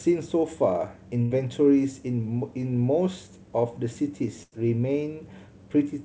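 At 1.22 to 1.34 s and 4.43 to 4.55 s, bursts of packet loss occur. Each gap is concealed by about 90 ms of held, fading sound, not silence, and then the speech jumps ahead past the missing audio.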